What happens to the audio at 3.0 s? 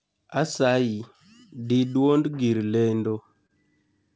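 At 3.0 s the speech is in a run of repeated stalls (stutter), from about 2.92 to 3.51 s, just after "dii duond gir". Packets arrived late, so the jitter buffer emptied four times and the receiver stretched the last sound to cover about 53 ms in total, the longest gap 26 ms, with nothing lost. It sounds like a brief drag and stammer. On a spectrogram, short horizontally smeared patches appear; the waveform shows repeated, near-identical cycles.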